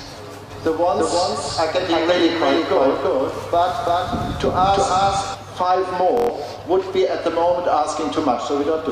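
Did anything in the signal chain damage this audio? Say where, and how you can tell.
Yes, two spots. From 0.51 s to 5.35 s there's a doubled audio track: a second, full-band copy of everything sits roughly a third of a second behind, about as loud as the original. There's no decay or room tone on it, and it starts and stops abruptly, so it isn't an echo. Most likely the same signal was routed in twice, either through a second, slower capture path at the driver or buffer stage or from an edit that left two copies out of step.

Then at 6.17 to 6.29 s there's a Bluetooth stutter, which points to the wireless link. For about 116 ms the receiver ran dry and kept replaying its last short slice, which you hear as a quick machine-gun buzz. The gap fits roughly five lost or late packets. When audio comes back it has jumped ahead, as though it kept playing underneath, so that stretch is simply gone rather than delayed.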